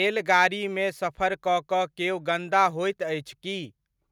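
Nothing in this speech recording stands out as a technical fault, so there's no problem to walk through here.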